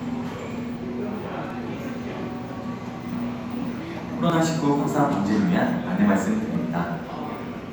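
A sound recording with four points where the audio jumps ahead, at 1.50, 4.30, 5.13 and 6.55 s. Each skips roughly 10 ms, except the one at 5.13 s, which loses closer to 30 ms. It's likely a dropped buffer (overrun), where samples got overwritten before being read.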